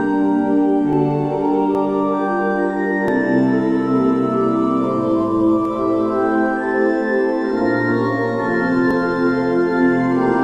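At 0.93, 1.75, 3.08, 5.65 and 8.91 s you get a jump in the sound, no gap at all. Each one is likely a dropped buffer (overrun): the capture side didn't pull its samples in time, the hardware wrote over them, and the two edges got spliced straight together. What goes missing is short, somewhere around 10 to 30 ms each time, so the sound just skips forward a touch.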